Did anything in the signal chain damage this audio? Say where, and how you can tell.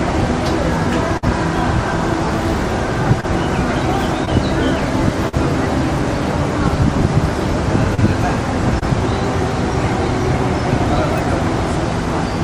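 Yes, the damage happened on the network. At 1.17 s the sound stops moving forward. For about 50 ms the last sound is held as a fading buzz or hiss, and then the audio picks up again at 1.24 s with roughly 40 ms of material missing. This is a burst of packet loss. Several packets in a row failed to arrive in time, so the receiver extended and faded the last good audio before it jumped ahead to the next packet that did arrive.

Five shorter blemishes follow, at 3.20, 4.25, 5.29, 7.95 and 8.79 s. Each is a brief smear or wobble, lasting from about 15 ms up to 40 ms at 5.29 s. This is short concealed packet loss. About 20 ms of audio went missing each time, and 40 ms at 5.29 s. The decoder covered each hole by continuing the preceding sound and then blending back into the real signal, which causes the momentary blur.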